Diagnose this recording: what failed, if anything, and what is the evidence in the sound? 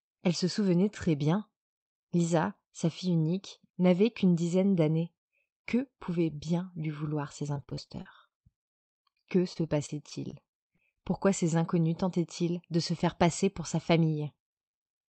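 The network is the culprit from 7.53 to 11.06 s, right after "bien lui vouloir ces". It's classic repeated packet loss with a robotic sound: a steady run of short holes, the longest about 41 ms. Concealment stretches the last sound across each one, and about 15% of that stretch ends up patched, so it comes out choppy.

At 13.44 to 14.12 s, after "de se faire", the jitter buffer speed-up kicks in. The buffer had drifted deeper than its target, so the receiver trimmed pitch-period-sized slivers, around 50 ms in total. The speech runs at about 107% speed with the pitch unchanged, and it sounds rushed.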